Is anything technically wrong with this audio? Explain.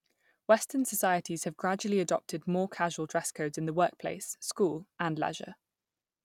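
No, the speech signal holds steady throughout, with no technical problems to be heard anywhere in the recording.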